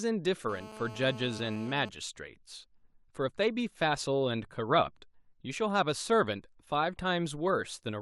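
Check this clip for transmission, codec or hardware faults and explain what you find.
One fault is present: GSM phone buzz, from 0.49 s to 1.89 s in this speech clip. A nearby 2G handset on a call is transmitting in bursts about 217 times per second, and the audio circuitry demodulates those radio pulses as if they were signal. The result is a hard, raspy buzz at 217 Hz, rich in harmonics, sitting about 16 dB below the speech. It holds steady throughout that span and bears no relation to the speech itself.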